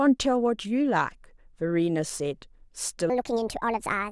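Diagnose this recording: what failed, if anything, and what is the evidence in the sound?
A section at the wrong speed, most likely from a playback or editing stage that read the final stretch of audio against a mismatched clock. From 3.10 s to the end at 4.12 s the speech runs 1.48 times faster than recorded, so timing and pitch move together: the voice jumps up by about seven semitones and sounds hurried and thin. The shift arrives abruptly at 3.10 s rather than drifting in, marking where the wrong rate takes over.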